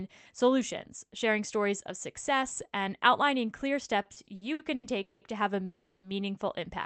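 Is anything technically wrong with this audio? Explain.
Yes, the speech breaks up twice near the end.

From 4.03 to 5.24 s there are repeated stalls (stutter): seven gaps where the receiver kept extending the last sound because packets arrived late, adding 460 ms, the longest 180 ms. It drags and jerks. The waveform shows smeared, repeated stretches, and the spectrogram shows horizontally stretched bands.

From 5.65 to 6.06 s a call audio freeze holds the sound for 380 ms as a fading buzz, likely from packets held up so the jitter buffer ran dry. The spectrogram shows a flat, decaying smear and the waveform a tapering envelope before speech resumes.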